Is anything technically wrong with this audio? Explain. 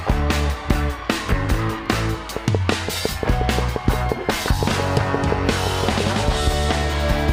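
Yes. From 2.37 s to 6.01 s a train of clicks runs over the sound, about 5.8 per second at an even spacing, some twenty in all, each standing well above the audio at around 15 dB louder. The cause is likely an outside pulse source, such as interference or a faulty connection, injecting the same spike repeatedly. It is heard as steady ticking that continues through pauses. Unlike random crackle or scattered dropout clicks, these pulses keep a matching shape and a regular pace.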